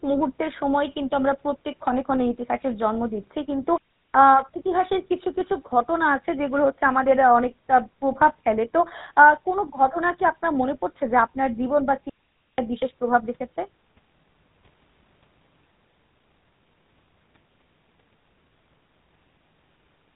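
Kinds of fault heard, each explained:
GSM full-rate codec: A buzzy, gravelly roughness colours the speech throughout, and nothing above 3.8 kHz comes through. This fits the 13 kbps GSM full-rate coder, which rebuilds the voice from a vocal-tract model driven by a coarse, regularly spaced pulse excitation.
Digital wireless dropout: The speech twice drops into a clean hole of near silence, from 3.78 to 4.13 s and from 12.09 to 12.58 s, with no noise burst either side. The wireless receiver lost too much data and briefly muted itself.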